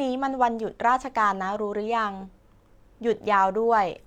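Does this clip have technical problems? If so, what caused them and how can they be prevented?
No, nothing in this speech clip stood out as a technical problem on listening, so there is nothing to trace back or prevent.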